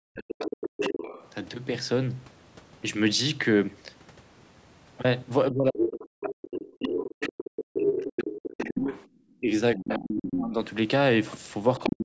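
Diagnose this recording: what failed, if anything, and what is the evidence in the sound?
The talker's speech drops out in ragged pieces from 0.0 to 0.91 s, through most of 5.5 to 10.6 s, and again from 11.8 s to the end, sinking by as much as roughly 40 dB at the worst points. That's speech suppressed in double talk, and the stage is call processing. The echo canceller likely couldn't tell the local talker from the loudspeaker echo while both sides spoke, so it turned everything down together.

A second voice also comes through alongside the talker: 0.21 to 1.28 s, 5.78 to 6.32 s, 6.87 to 9.04 s, 9.78 to 10.39 s, and from 11.76 s to the end. Around 5.78 s it's about as loud as the talker. Elsewhere it sits a few dB lower, and at the tail it's well below. That's the other side's voice leaking through, likely because the far end playing on the loudspeaker wasn't fully cancelled from the mic. 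The suppressed stretches overlap these spots, which fits the canceller struggling whenever both sides are active.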